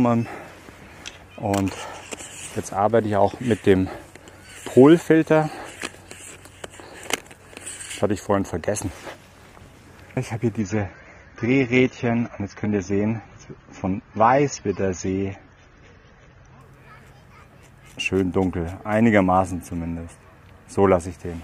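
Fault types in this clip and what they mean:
Adaptive stream at a lower bitrate: the player dropped to a leaner version of the stream when the connection slowed, then climbed back, with no gap at either switch. From 10.6 s to 16.6 s the sound abruptly loses everything above 6.9 kHz and turns dull and grainy, with codec artefacts rising. The sharp change in bandwidth fits a fall from roughly 96 kbit/s AAC to about 24 kbit/s before full quality snaps back.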